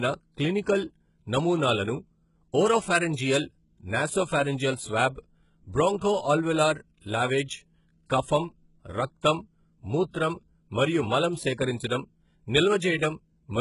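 The speech was likely squeezed through HE-AAC compression at a very low rate, consistent with roughly 12 kbps. Throughout, the treble is rebuilt from copied lower bands and stops at 11.1 kHz, so s sounds come out heavily gritty, metallic and lispy.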